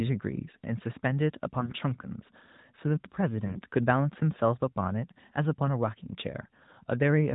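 Speech over an AMR narrowband link shows AMR bit errors at 1.60–1.73 s and 3.46–3.62 s, where roughly a tenth of the weakly protected frame bits arrived flipped, turning the voice briefly hoarse and gargly.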